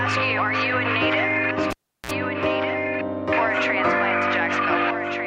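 At 1.70 s the audio drops out with a pop, sits near silent for about 356 ms, then gives a 45 ms burst of 60 Hz mains buzz before popping back at 2.11 s: a cable pulled and plugged in, with the buzz from the tip touching before the plug seated.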